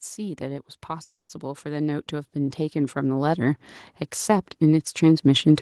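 Automatic gain rising runs from 0.05 s to 3.67 s. The automatic gain control judged the incoming speech too quiet and kept turning up its gain, about 11 dB in all. Because the gain acts on everything it receives, the voice and the background noise behind it swell together. Over more than three and a half seconds the whole sound grows steadily louder and closer, and it settles only once the gain stops rising.

A call audio freeze interrupts this from 1.03 s to 1.31 s. The speech stops moving forward and the last sound is stretched into a buzzy tail that fades out, leaving roughly 130 ms of silence before the speech picks up exactly where it left off. The likely cause is packets held up in transit, which emptied the jitter buffer so the receiver had to fill about 260 ms on its own. Nothing of the speech is lost. Everything after the gap simply arrives about 260 ms later.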